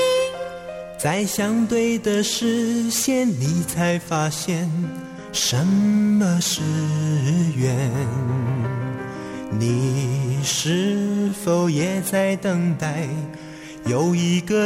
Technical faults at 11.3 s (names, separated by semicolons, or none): repeated buffer